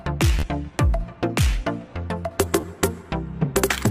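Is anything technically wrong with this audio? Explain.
Yes, there are two instances of Bluetooth stutter. From 0.39 to 0.43 s, the wireless link failed to deliver data in time, so the receiver kept replaying its last short buffer, producing a brief buzzing repeat. About 40 ms of sound is lost, which fits roughly three missing packets. At 2.61 to 2.63 s the same thing happens more briefly, dropping about 27 ms, consistent with two packets. After each stutter, playback resumes further along, skipping the lost audio rather than catching up.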